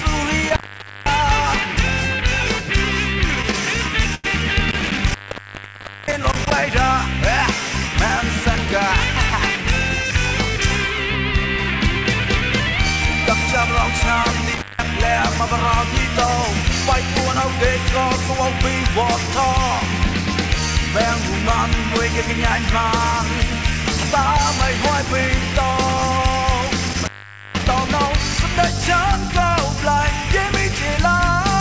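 At 0.49 s an intermittent contact begins. A loose plug or cable breaks the connection, and the sound drops out for about half a second before returning at 1.14 s. The gap has crackle at both edges and faint hiss between them. The same fault returns three more times. From 4.71 to 6.51 s the line is open for 0.93 s in total. From 14.54 to 14.88 s it is open for 0.17 s. From 26.89 to 27.74 s it is open for 0.47 s. Each time the sound crackles and then cuts out.

Between the first two dropouts there is a short stall from a late packet, at 4.15 to 4.26 s. A packet arrived late and the jitter buffer ran dry. The receiver held the last sound for 90 ms until the packet came, then carried on from the same point. Nothing is lost. You hear a brief smeared hold with a slight buzz or dip. Everything after it plays 90 ms later. The call path cuts off everything above 8 kHz, which fits a 64 kbps G.722 link.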